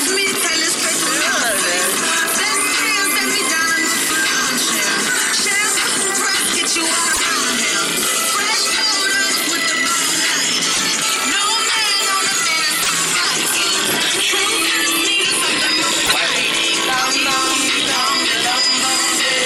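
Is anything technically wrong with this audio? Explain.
Yes. At 7.12, 10.73, 12.82 and 16.05 s, the sound jumps ahead with a chirp, noise burst or short gap of about 80 to 90 ms, roughly three 26.1 ms frames. The likely cause is a broken MP3 bit reservoir. Frames were lost, and the following frames decoded from misplaced data.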